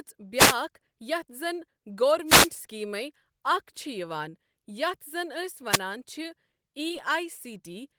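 A short swish of static rises over the speech from 0.36 to 0.56 s and again from 2.26 to 2.50 s. These are wireless microphone noise hits: the analogue FM radio link momentarily faded as reflected signals cancelled, letting receiver hiss surge through. At 4.29 to 4.34 s, just before "یَتھ زَن", comes a brief smeared wobble, a short concealed packet loss in which about 40 ms of audio arrived too late and the decoder bridged 38 ms of it by extending the preceding sound. A third, shorter static burst from 5.69 to 5.80 s is another wireless noise hit. At 6.89 s a brief smear marks a second concealed loss, this time only about 10 ms patched over.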